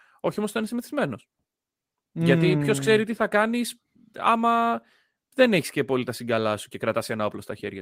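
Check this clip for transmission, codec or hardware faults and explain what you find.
No transmission, codec or hardware fault can be heard anywhere in the speech. Nothing in the recording calls for further explanation on that front.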